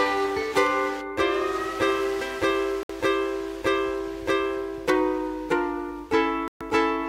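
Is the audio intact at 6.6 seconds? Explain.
No. A digital broadcast dropout runs from 6.48 to 6.61 s. The receiver stopped getting valid frames and muted until good ones returned. The sound cuts to silence for about 128 ms, which fits four lost frames. Whatever was sent then is gone.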